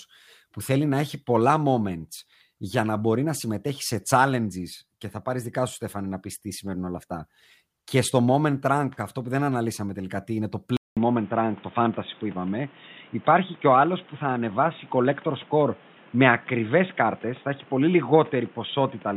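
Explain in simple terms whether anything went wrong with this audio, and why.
At 10.77 seconds the speech suddenly turns dull and boxy, as if heard through a phone, and stays that way to the end. Just before the change there is a brief gap of about 0.2 seconds, and afterwards a faint new background hiss sits under the voice, though the loudness stays the same. Everything above about 3.8 kHz is gone. This is likely an input switched to a poorer device, with the recording jumping to a lower-quality microphone that cannot capture the higher, crisper sounds.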